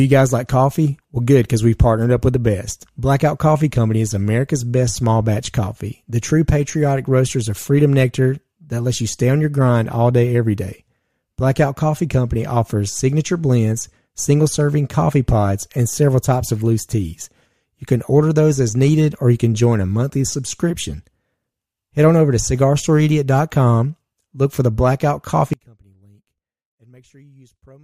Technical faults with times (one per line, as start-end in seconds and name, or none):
25.53-27.84 one channel inverted